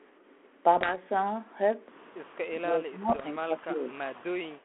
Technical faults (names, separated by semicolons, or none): bit errors on an ADPCM link; speech suppressed in double talk